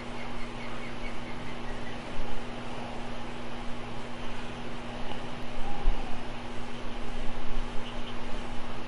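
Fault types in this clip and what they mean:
Overlap between stream segments: two adjacent chunks of the stream claimed some of the same time span, so the player trimmed that shared stretch even though the sound in it wasn't actually duplicated. Here about 13 ms of audio simply vanishes at 5.43 s, and the waveform jumps straight across the missing bit. You hear it as a single small click or hiccup, a tiny skip forward rather than a dropout or a repeat.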